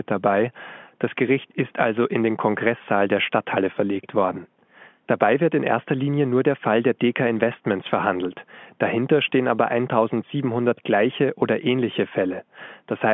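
Speech over an ordinary G.711 telephone path, band-limited to roughly 150 Hz–3.4 kHz as that line format dictates; nothing technically wrong is audible.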